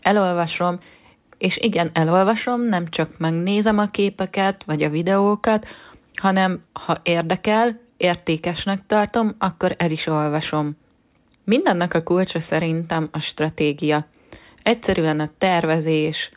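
The speech signal shows no technical faults at any point in the recording.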